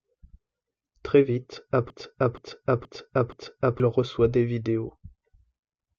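From 1.90 s to 3.80 s the speech falls into a broken-record loop. A fragment of 0.47 s plays four times back to back, identical on every pass, before normal audio resumes at "reçoit des vidéos". The likely cause is a stalled player or stream resending the last piece it held, so whatever should have played in that span is lost. A waveform or spectrogram shows the same block of shapes repeating at exact 0.47 s intervals.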